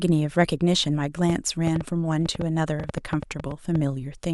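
A speech recording carrying a train of clicks from 1.30 to 3.76 s: around fifteen sharp, similar pops at about 6.1 per second, unevenly spaced, peaking roughly 10 dB above the speech and audible in pauses too, likely from electrical interference or a faulty connection or power supply. Spectrograms show thin full-height vertical lines; waveforms show narrow spikes.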